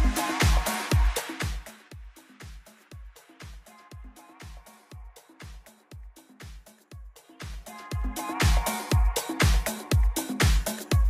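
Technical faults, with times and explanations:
7.20–8.49 s zipper noise: the level shifts about 20 dB in steps of about 2 dB, roughly ten a second, each clicking audibly, unlike a smooth fade.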